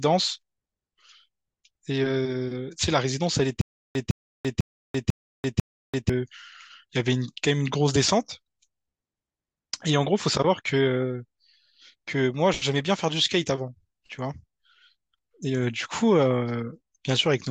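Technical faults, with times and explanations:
3.61 to 6.09 s, stutter with silent gaps: a 157 ms fragment of speech repeats five times, each followed by 339 ms of digital silence, a steady 496 ms cycle. Playback likely stalled, replaying its last fragment at each retry. That stretch of speech is lost.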